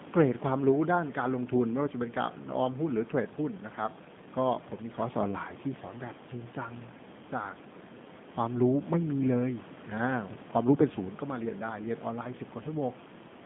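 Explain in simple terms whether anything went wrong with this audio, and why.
From start to finish, the speech sounds thin, slightly rough and robotic, like a phone call. That is G.729 codec damage: the voice is rebuilt from a rough model of the throat and a few pulses, and everything above about 3.6 kHz is cut. The room noise behind it is part of the recording.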